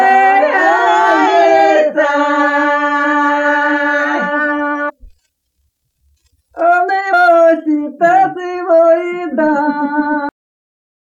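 At 4.88 to 4.90 s and again at 7.12 s, damaged data in a compressed stream makes the decoder lose frame sync, producing brief glitches. At 10.29 s the final buffers were never written, a cut-off end, so the sound halts abruptly into dead digital silence without any natural decay.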